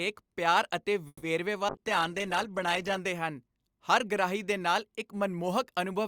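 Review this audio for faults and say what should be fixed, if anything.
The call audio freeze likely came from packets held up in transit, which emptied the jitter buffer. From 1.07 to 1.24 s the receiver extends the last sound as a fading buzz, ending in about 40 ms of silence. Nothing is lost, but 150 ms of gap is inserted, so everything after it arrives 150 ms late. To prevent it, use an adaptive jitter buffer with enough headroom to ride out short delivery stalls.

The call bitrate drop happened when the bandwidth estimate fell and the Opus encoder was cut from 64 to 15 kbps between 1.69 and 3.06 s, staying at the low rate for about 1.3 s. The speech turns coarse and watery, with its upper frequencies trimmed away, until the bitrate recovers. To prevent it, tune bandwidth estimation to react less sharply to brief dips and ramp the encoder rate down more gradually.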